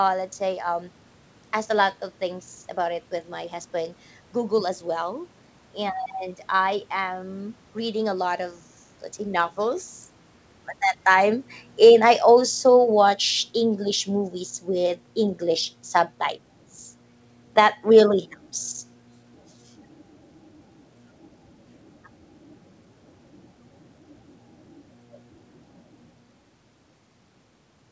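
Automatic gain falling runs from 10.96 s to 18.22 s. Around 10.96 s the gain control judged the incoming level too hot or its background noise too strong and began pulling its gain down step by step, losing about 6 dB by 18.22 s. The speech starts out loud and then sinks gradually, and the room noise sinks with it. That shared drop tells it apart from the talker's own movement near 11 s, which changes only the voice.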